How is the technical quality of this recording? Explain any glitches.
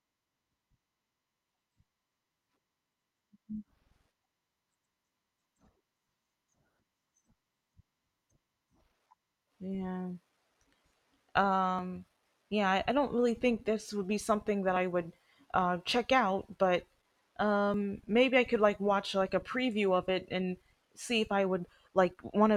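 The recording has three brief skips of audio missing between chunks, at 11.79 s, 14.76 s (between "would be something that" and "would uh check out"), and 17.74 s (just before "maybe I could like"). Each removes about 20 ms with no gap. Their regular 3-second spacing likely comes from losing audio at chunk boundaries.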